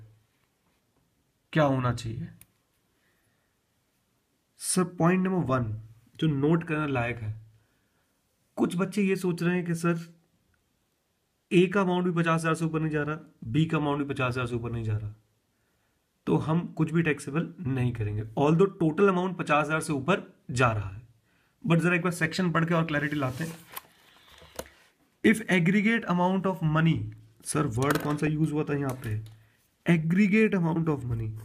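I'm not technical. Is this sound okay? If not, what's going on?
No, there's DAB burbling at 5.45 to 5.61, 12.60 to 12.70 and 28.09 to 28.27 seconds: weak digital radio reception let errors through, garbling the sound briefly.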